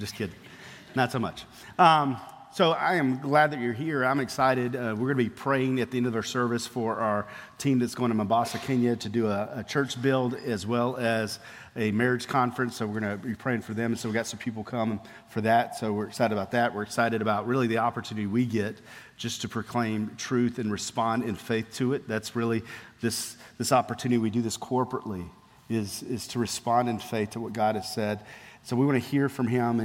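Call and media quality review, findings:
Channel delay (comb filtering), 20.30 to 21.60 s. Dulling of the extreme top end. One channel lags by about one sample, roughly 0.02 ms, before the mono sum. First cancellation notch sits near 20 kHz. Probable component: downmix or channel alignment stage.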